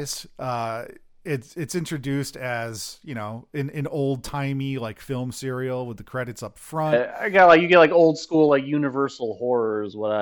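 No technical faults can be heard anywhere in the speech recording, and the signal stays steady and continuous throughout.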